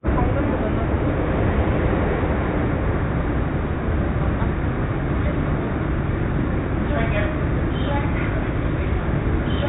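Everyday sounds, with no technical faults to report.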